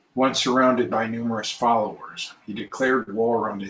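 From about 2.46 to 3.09 s you get repeated stalls (stutter). Packets showed up late, the jitter buffer kept running dry, and the receiver stretched the last sound to cover five gaps, up to 45 ms each. Nothing's lost, but that stretch drags and hiccups, over the 8 kHz-limited sound of what's likely a G.722 call path.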